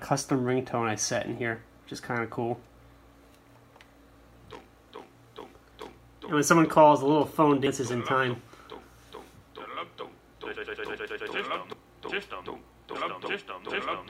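At 7.66 s and again at 11.73 s, compressed frames are skipped: roughly a tenth of a second of audio vanishes, which fits three 32 ms frames, leaving the audio jumping ahead. Spectrograms show an abrupt content jump at each.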